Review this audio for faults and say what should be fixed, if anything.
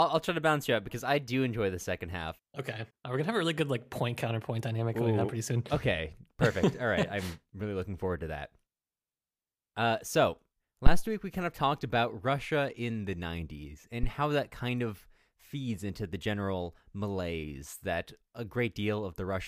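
Two phantom power thumps occur in this speech, at 10.87–11.06 s, just before "week we kind of", peaking at about -7 dBFS with a 45 ms decay, and at 14.03–14.10 s, before "that kind of feeds", at about -17 dBFS decaying over 16 ms. Each is a supply step passing through the coupling capacitors. Unlike a plosive pop, each decays smoothly as one low impulse rather than the irregular rumble of handling noise. Switch phantom power only with the channel muted or the fader down.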